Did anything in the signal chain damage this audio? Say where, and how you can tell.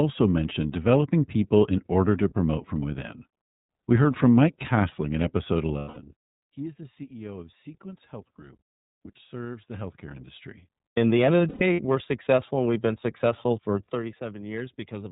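Yes. The codec stage causes damage throughout. The iLBC codec leaves nothing above 4 kHz on a spectrogram, and the speech sounds rough and synthetic, which fits iLBC's 13.33 kbps, 30 ms frame mode.

The network stage also drops packets, heard as lost iLBC frames. The decoder fills each gap by repeating the last pitch cycle, which sounds like a buzzy held vowel and shows as smeared, fading harmonics. This happens at 3.77–3.83 s after "to promote from within" and at 5.79–5.98 s after "in episode". A third loss is scattered over 11.49–11.80 s, between "the end of the" and "we're successful and we've", with its longest run about 100 ms.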